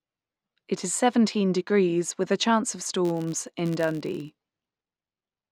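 From 3.05 s to the end, just after "with a chance of", the filter restarts on every block, beginning each from silence. This adds a level-following 86.1 Hz buzz, which fits a 512-sample buffer: evenly spaced vertical lines on a spectrogram, tiny repeating transients in the waveform.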